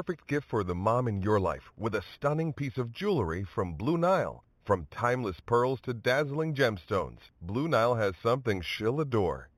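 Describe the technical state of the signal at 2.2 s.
At 2.2 s, as throughout the clip, the speech shows imaging from linear upsampling. The rate was raised by straight-line interpolation, which fits a rise from 8 kHz to 44.1 kHz. The top of the band is dulled, and mirrored copies between 4 and 8 kHz sit roughly 25 dB down, adding a faint metallic shimmer to sibilants.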